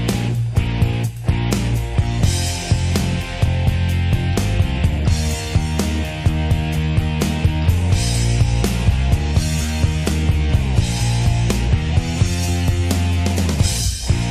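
Nothing in this recording stands out as a technical problem; it runs along without a single moment that calls for a closer listen.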